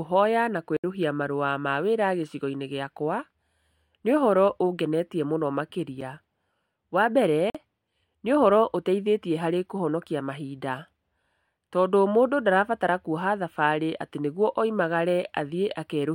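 At 0.77 s the speech drops into a block of digital silence lasting about 70 ms, heard as a short hole. At 6.01 s a 7 ms gap gives a single sharp tick. At 7.50 s a 46 ms gap, which fits a 2048-sample buffer, sounds like a brief pop. Each time, the samples became zeros, likely because the output buffer was not filled in time. The cut is abrupt, with no fade.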